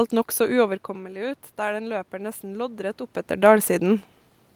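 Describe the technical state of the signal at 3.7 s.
At 3.7 s the signal is intact, with only the background noise of the room in which it was recorded.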